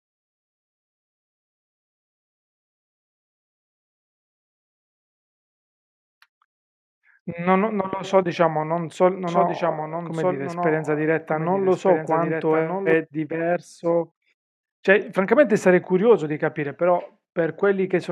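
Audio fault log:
9.28–12.94 s doubled audio track: a dry copy trails about 1.5 s behind, about 5 dB quieter, likely from a slower second capture path; the spectrogram shows shifted duplicate patterns with abrupt edges.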